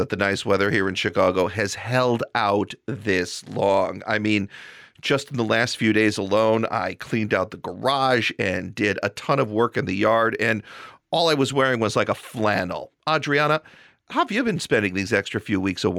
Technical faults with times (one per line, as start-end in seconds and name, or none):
0.00-15.99 gain pumping